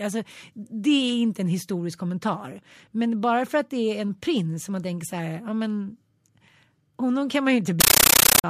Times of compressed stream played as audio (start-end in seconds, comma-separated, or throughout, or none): 7.80-8.44